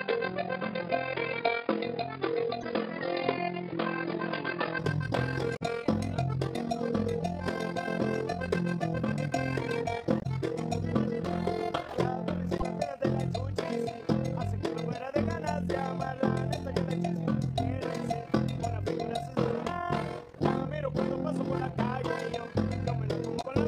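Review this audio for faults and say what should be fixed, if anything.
Overlap-add ripple runs through the whole clip: the level pulses by about 11 dB at around 40 times a second, giving a rough, robotic flutter. Frames were windowed and recombined with an overlap that doesn't sum to constant gain. A waveform shows a regular scalloped envelope, and a spectrogram shows fine vertical banding at that rate. Prevention: use a window and hop pair that satisfies the constant-overlap-add condition.

From the start to 4.79 s the sound is dull and boxy, with a faint noise floor about 35 dB below the signal. At 4.79 it opens up again with no gap and no level jump. This is likely an input switched to a poorer, narrower-band device. On a spectrogram it appears as a lowered high-frequency ceiling that suddenly lifts. Prevention: lock the input device for the whole session.

Damaged data in a compressed stream causes short chirps or blips at 2.61, 5.53, 10.17, 12.58 and 23.38 s, each lasting roughly 30 to 90 ms. 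Corrupted frames are misdecoded while the decoder resyncs. They look like brief broadband smears or discontinuities in the waveform. Prevention: carry the stream over a checksummed, error-protected transport.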